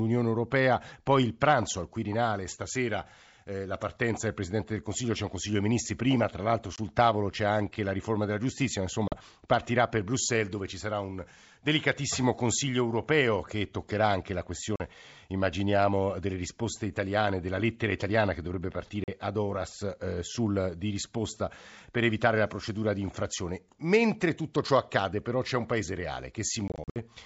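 Packet loss on an ADPCM call cuts hard-edged holes into this Italian speech at 6.76–6.78 s, between "prima tra l'altro" and "tavolo c'è anche la"; at 9.08–9.17 s; at 14.76–14.81 s, after "che toccherà anche la"; at 19.04–19.09 s, after "lettera italiana che dovrebbe"; and at 26.68–26.97 s, where about 160 ms goes missing in scattered runs of up to 60 ms. Unlike a plain dropout, each hole is followed by brief distortion. The decoder's predictor and step size fall out of step with the sender's across the gap and take some tens of milliseconds to recover. The clean 7 kHz wideband sound around the holes fits G.722 at 64 kbit/s.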